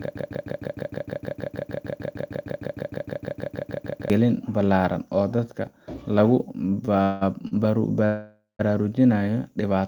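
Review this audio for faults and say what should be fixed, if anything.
From the very start the audio is already caught in a broken-record loop, running to 4.10 s. A fragment of about 154 ms repeats exactly, back to back, 26 times. The pattern points to the player, encoder or stream having stalled and resent the last fragment it held. Whatever should have played during those four seconds is gone. To prevent this, add stall detection that flushes or restarts the pipeline instead of recycling its last buffer.

Two short stalls from a late packet follow, at 6.85 to 6.99 s and at 7.47 to 7.53 s. In each the last sound is held too long, by about 23 ms and 41 ms respectively, with a slight buzz or dip, before the audio resumes where it left off. The first also adds about 10 ms of extra length. Nothing is missing. The jitter buffer ran dry because a packet arrived late. A deeper or adaptive jitter buffer would absorb delays of this size.

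There are two call audio freezes, at 7.03 to 7.23 s and at 8.05 to 8.61 s. In the first, the last sound is stretched into a fading buzz or hiss for 184 ms. The second lasts 539 ms, and 170 ms of it decays to silence. Both times the audio picks up where it stopped, so a gap is inserted but nothing is lost. The likely cause is packets held up in transit emptying the jitter buffer. To prevent this, address network delay spikes and size the jitter buffer for bursts of around half a second.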